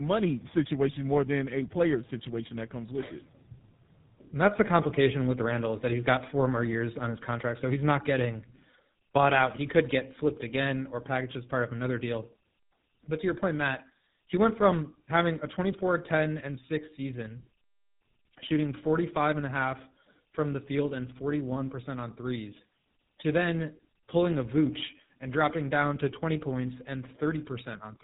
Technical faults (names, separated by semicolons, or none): tandem speech coding